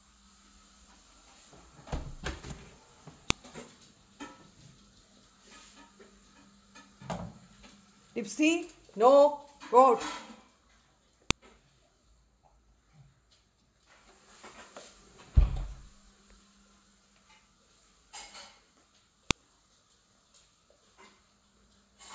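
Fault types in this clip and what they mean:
File header played as audio: sharp, loud clicks at 3.30, 11.31 and 19.31 s, spaced exactly 8 s apart and unrelated to the surrounding sound. Separately stored 8-second pieces were joined with their WAV headers left in, so those header bytes play back as samples.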